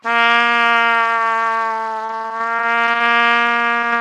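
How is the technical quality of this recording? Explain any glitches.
Two kinds of packet-loss damage stand out in the second half of this everyday-sound recording.

From 2.05 to 3.02 s there's repeated packet loss, giving a robotic sound. About a dozen holes arrive in quick succession, the longest about 36 ms, and each gets patched by stretching the previous sound. Roughly a quarter of that stretch is filler, so it turns choppy.

Then there are two short concealed packet losses, at 3.81 and 3.91 s. Each drops about 20 ms, which the receiver covers by continuing the last sound before blending back in. You hear a quick smear or wobble, and a brief transient there can disappear.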